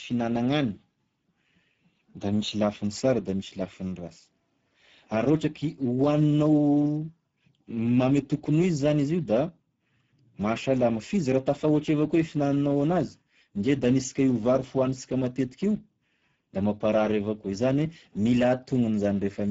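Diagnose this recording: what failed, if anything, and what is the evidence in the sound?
The codec stage used low-rate Speex throughout, which fits roughly 10 kbps. Starved CELP excitation leaves speech plainly hoarse and noisy, with nothing above 7.7 kHz.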